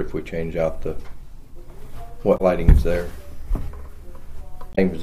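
Damaged data in a compressed stream: at 2.34 to 2.41 s and 4.72 to 4.79 s, corrupted bytes make the decoder misread its frames and lose sync while hunting for the next frame header, so the audio breaks into a brief chirp, squawk, click or short hole lasting about 70 ms each time.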